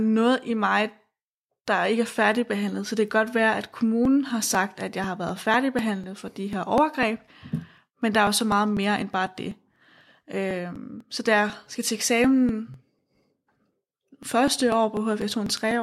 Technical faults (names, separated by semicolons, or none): periodic USB or driver dropouts